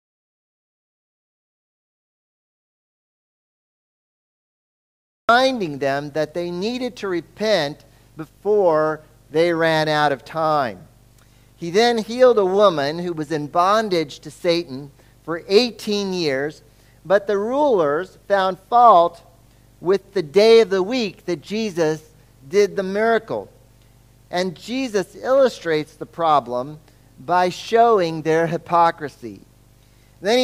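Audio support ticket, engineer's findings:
Audio dropout to silence, 0 to 5.29 s. Already under way at start. Dead silence, no room tone. Likely input link lost while the recorder kept writing.

Video or display buzz throughout. 50 Hz field-rate buzz with hash, plus a 15.6 kHz line-rate whine. About 30 dB below signal. Screen or video cable coupling into audio.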